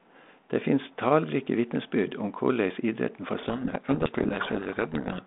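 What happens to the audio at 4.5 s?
Harsh distortion buries the speech from 3.38 to 5.21 s, just after "om korleis idretten for". This is a codec payload misread: the decoder unpacks each G.726 code word with its bits in the wrong order.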